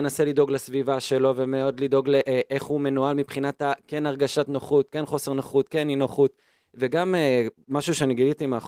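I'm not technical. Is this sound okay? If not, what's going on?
Yes, nothing wrong turned up in this recording.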